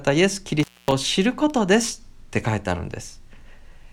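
At 0.60 s an intermittent contact briefly opens the line for about 245 ms. The speech cuts out with crackle at both edges, showing as a near-empty gap with spiky bursts on the waveform.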